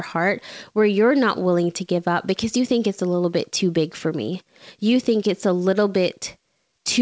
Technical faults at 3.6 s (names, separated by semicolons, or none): none